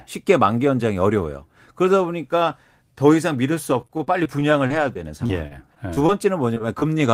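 From 3.81 to 6.10 s the speech breaks up into repeated packet loss with a robotic sound. Fourteen gaps fall across this span, the longest about 41 ms. The receiver bridges each by extending the preceding sound, 272 ms of patching in all, about 12% of the stretch, while 180 ms of real audio is gone. It sounds choppy, with pieces missing. A spectrogram shows repeated patches of copied, smeared harmonics with abrupt seams, and the waveform shows runs of near-identical periods.

At 6.54 to 6.58 s comes a short concealed packet loss. About 20 ms of audio never arrived in time, and the gap was filled with 17 ms of synthesized continuation before blending back. It is heard as a quick smear or wobble. On a spectrogram a thin column carries blurred, frozen spectral content, and the waveform shows a brief repeated cycle.

Immediately after, from 6.58 to 6.62 s, a short stall from a late packet follows. 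The jitter buffer emptied, and the last sound was stretched for 17 ms until the packet arrived, adding about 17 ms of delay. Nothing is missing, but the sound is held slightly too long with a slight buzz or dip. The spectrogram shows a steady segment lengthened in time.

A second short concealed packet loss occurs at 6.80 to 6.83 s, again losing about 20 ms with 16 ms filled, giving another brief smear and a matching blurred sliver on the spectrogram.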